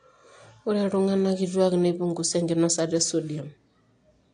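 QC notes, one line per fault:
Throughout: AAC compression, likely the cause of a dull, smeared quality across the whole speech clip, with nothing present above 9.8 kHz and a fizzy, warbling texture on sibilants and held sounds. The damage fits AAC-LC at a low bitrate, around 32 kbps. The encoder discards detail the hearing model treats as masked and gaps or noise-fills the upper bands. That shifting texture distinguishes it from a clean low-pass filter, which would remove the top without adding artefacts.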